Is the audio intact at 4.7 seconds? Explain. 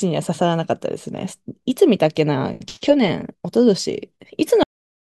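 No. At 4.7 seconds the speech has stopped: a cut-off end truncates the audio at 4.63 s, mid-sound, because the final buffers never got written. It drops straight into digital silence through 5.16 s, a hard vertical edge followed by a flat waveform and an empty spectrogram.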